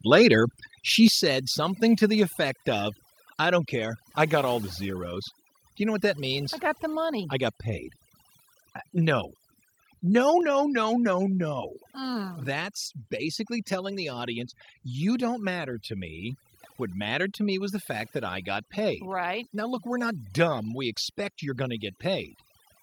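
Overdone noise removal runs through the whole speech clip. The denoiser was pushed too hard, so any frequency band that sits near its noise estimate gets pulled way down or shut off entirely. The background ends up as near-silence with little twinkling specks in it, and the softer parts of the voice get eaten along with the noise.

Then there are two microphone volume step-downs. At about 1.08 s, between "later she" and "said something to", the whole signal, voice and background together, suddenly drops by about 6 dB. That's likely the call software deciding the mic was running hot and cutting the input volume in one step. At 10.41 s, right before "no no no no", it happens again, a smaller drop of about 3 dB, with the same abrupt change in level.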